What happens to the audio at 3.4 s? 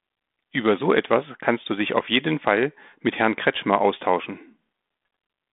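Nothing goes wrong at 3.4 s: the speech continues intact through the G.726 telephone channel, narrowed to roughly 200 Hz to 3.6 kHz as it is throughout.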